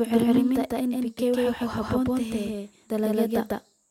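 From the very start and all the way through, the speech is shadowed by a second copy of itself, a doubled audio track. The copy trails by roughly 150 ms and sits at about the same level as the original, so every syllable gets a hard, clean echo with no room tail on it. That fixed, uncoloured lag is most likely the signal being picked up twice, once through a slower route.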